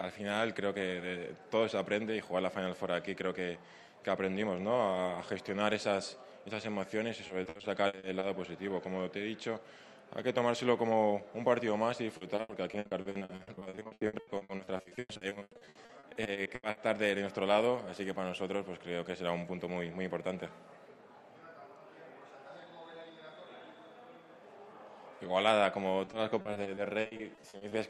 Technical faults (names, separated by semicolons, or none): repeated packet loss (robotic sound)